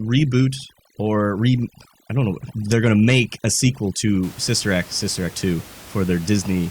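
A speech clip whose background, from the start to 4.23 s, drops and breaks up into twinkling specks: overdone noise removal, where an aggressive reducer shuts off individual frequency bands near its noise estimate, taking quieter vocal detail along. After that, room noise sits about 22 dB below the speech.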